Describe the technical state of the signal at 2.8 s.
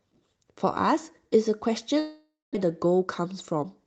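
At 2.8 s the speech sits inside a jitter buffer speed-up lasting from 2.65 to 3.85 s. Excess buffered delay was trimmed by repeatedly cutting short pitch-period pieces, about a tenth of a second overall. Playback runs at 107% speed, pitch unchanged, sounding hurried.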